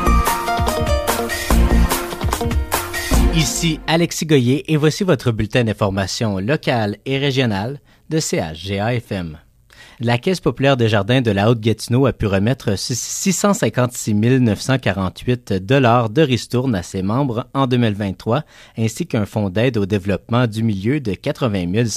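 No technical faults can be heard anywhere in the audio, with the signal staying continuous and steady throughout.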